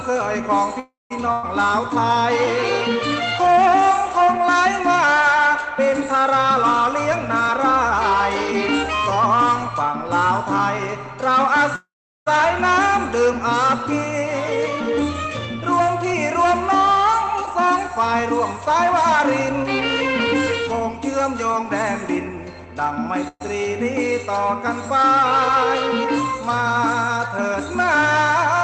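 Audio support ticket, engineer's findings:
Call audio freeze, 0.79–1.12 s. Packets likely held in transit, jitter buffer ran dry. Last sound stretched into a fading buzz or hiss, then about 170 ms of silence. 310 ms gap inserted, nothing lost; audio resumes where it stopped.

Call audio freeze, 11.76–12.28 s. Likely same stall, longer. Concealment fades to roughly 390 ms of silence; 507 ms pause added, content intact.

Call audio freeze, 23.28–23.42 s. Likely a short stall, 123 ms fill, brief 30 ms dropout before resuming.

Burst of packet loss, 1.32–1.45 s. Consecutive packets lost or arriving too late to play. Decoder extends the last sound as a decaying buzz/hiss for 105 ms with no silence, then jumps ahead; about 100 ms of audio is gone.

Jitter buffer speed-up, 6.45–10.26 s. Buffer overfilled, likely after delayed packets arrived together; receiver trimming pitch-period slices repeatedly to cut latency. 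Playback runs at 107% speed, pitch unchanged, sounds hurried; roughly 0.3 s removed.

Jitter buffer speed-up, 14.92–23.19 s. Same catch-up, at 106% speed; about half a second dropped, rushed pacing throughout. Opus call path audible as a top end cut off at 8 kHz.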